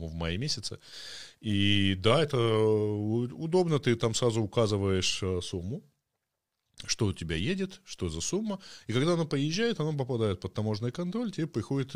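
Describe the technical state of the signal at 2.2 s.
At 2.2 s the speech signal is intact, with no audible fault at that moment.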